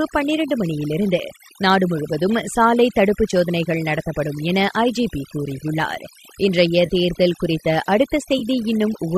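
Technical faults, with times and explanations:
throughout overdone noise removal: aggressive noise reduction switches off frequency bands near its noise estimate, leaving a near-silent background with twinkling specks; the spectrogram looks patchy and holed.
6.86–6.90 s and 8.39–8.42 s AAC frame loss with concealment: 30 ms and 20 ms gaps, consistent with lost 10 ms frames of the likely low-delay AAC stream, are filled from the previous spectrum. Each sounds like a brief smeared, phasey blip and shows as a blurred vertical stripe on the spectrogram.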